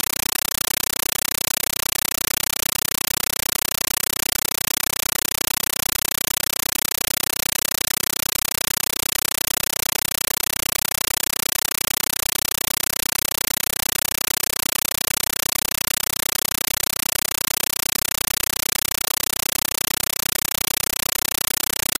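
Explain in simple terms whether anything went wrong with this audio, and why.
Something definitely went wrong, and it lasts the whole clip: it's a compressed stream played as audio. Instead of speech you get very loud, chattering static. The rhythm gives it away: short bursts of noise about 9 ms long, each followed by silence, repeating 31.25 times a second. That pattern points to a Dolby Digital stream sent over a digital link where the receiving end treated the coded data as ordinary sound instead of decoding it.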